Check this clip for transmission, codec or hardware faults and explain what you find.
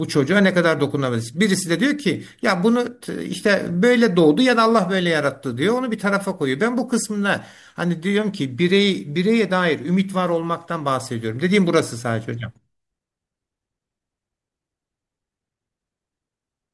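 Nothing to flag here; the speech comes through with no fault showing up anywhere in it.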